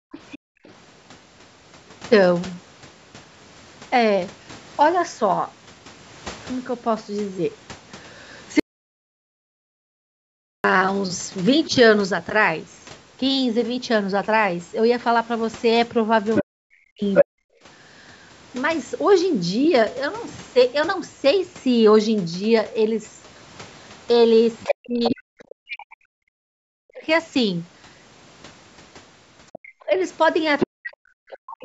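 At the very start, from 0.0 to 0.12 s, the room tone dips by about 39 dB for roughly a tenth of a second. This is background gated by the echo canceller: with the loudspeaker active, the canceller clamped the microphone hard and released it moments later.

From 0.12 to 0.73 s a second voice sits faintly beneath the talker, around 20 dB down. This is the other side's voice leaking through, likely loudspeaker playback that the echo canceller failed to fully remove from the microphone.

Within that overlap, at 0.47 to 0.59 s, the talker's own speech sinks by as much as 40 dB for about 100 ms. This is speech suppressed in double talk: the canceller likely could not separate the talker from the echo, so it turned both down.

From 8.60 to 10.64 s the sound cuts to total silence, with no room tone, for about 2.05 s, then resumes mid-flow. This audio dropout to silence likely came from a lost input while silence kept being written.

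The leak returns at 16.34 to 17.25 s, now about 5 dB louder than the talker, likely from uncancelled loudspeaker echo. Speech is again suppressed in double talk from 16.42 to 17.52 s, dipping up to 40 dB across roughly a second, likely because the canceller ducked both voices.

From 24.6 to 25.15 s the far voice leaks through at about 5 dB under the speech, likely residual echo. From 24.64 s to the end, the talker is suppressed in double talk, dropping up to 40 dB over roughly 4 s in total, likely the canceller reacting to the overlap. Within that stretch, the leak recurs from 29.53 to 31.36 s at around 5 dB below the speech, likely the same residual echo.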